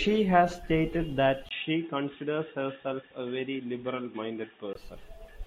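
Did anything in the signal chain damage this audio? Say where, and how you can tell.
Yes. After "has stated that", a 20 ms gap at 1.49 s gives way to dull, boxy sound with nothing above 3.8 kHz until 4.75 s, likely the input switched to a poorer device.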